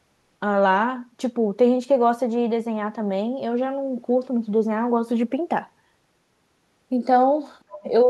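A speech clip with one brief fault: from 7.69 to 7.83 s, a faint second voice, the other side's voice leaking through, sits about 20 dB below the main talker. The likely cause is an echo canceller leaving a scrap of the far end's loudspeaker playback in the microphone signal. On a spectrogram it would show as a weak, separate set of harmonic traces for that 0.14 s.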